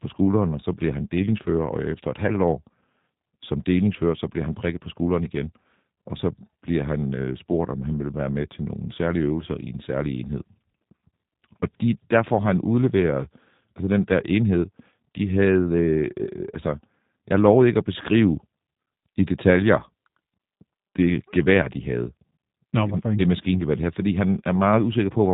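From start to finish the speech carries G.729 codec damage, and it is plainly audible. Each 10 ms frame is rebuilt from a vocal tract filter, a pitch predictor and a handful of pulses, which fits an 8 kbit/s G.729A stream, so voices sound rough and faintly synthetic. On a spectrogram, energy stops flat at about 3.8 kHz with nothing above. Harmonics look smeared and grainy, and the waveform shows a coarser, buzzier fine structure.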